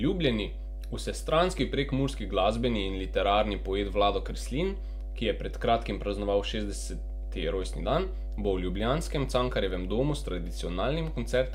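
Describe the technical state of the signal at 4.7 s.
At 4.7 s the speech sits on top of mains hum, which runs through the whole clip rather than starting or stopping near this point. A ground loop or nearby transformer is leaking the 50 Hz power line into the signal, heard as a steady low tone with a few low harmonics, only a little quieter than the speech itself. Unlike handling noise or wind rumble, it holds one fixed pitch and never drifts or gusts.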